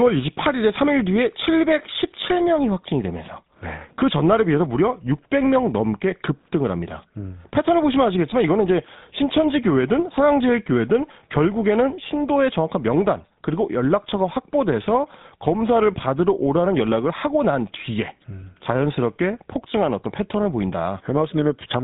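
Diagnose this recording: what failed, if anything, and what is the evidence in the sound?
Codec stage: GSM full-rate coding throughout. Nothing passes above 3.8 kHz. Speech has a buzzy, gravelly roughness from pulse excitation, consistent with 13 kbps.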